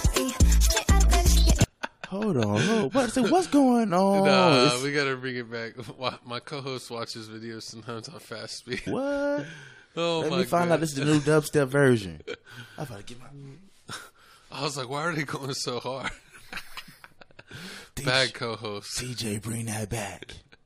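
At 8.86 s the audio lurches forward with a brief blip, and the passage that should follow is missing, so the sound resumes at a later point. This points to a stream segment skipped: one segment of the segmented stream likely failed to load, and rather than stalling, the player jumped straight to the next segment. The blip marks the splice where the two non-adjacent sections of the programme were joined.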